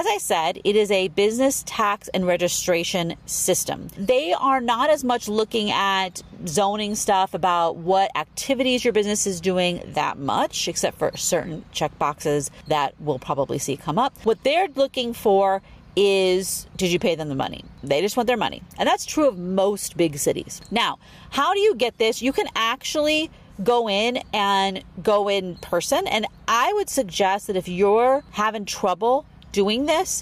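Gain pumping runs the whole way through: the level ducks by around 10 dB under loud sounds, likely from a fast limiter fighting excessive mic gain.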